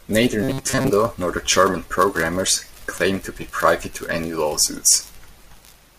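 From 0.43 to 0.90 s the speech goes robotic, with a rigid, metallic buzz locked around 133 Hz that still roughly tracks the talker before clearing just ahead of "nor the". That buzz frequency points to a block of about 7.5 ms being looped. The likely cause is robotic sound from repeated short buffers: fresh audio stopped arriving in time, so the playback side kept replaying its last tiny chunk for most of that stretch, and the real audio underneath got skipped.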